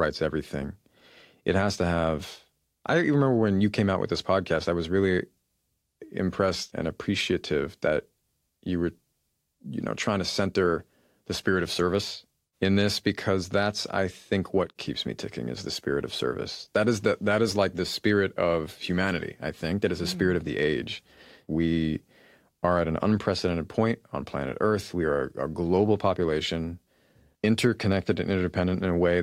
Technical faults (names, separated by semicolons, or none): none